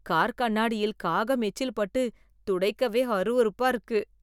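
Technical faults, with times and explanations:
Nothing stood out as a technical fault on listening to this speech recording.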